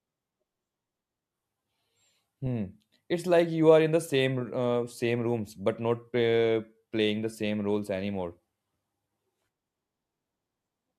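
No technical faults can be heard at any point in the recording.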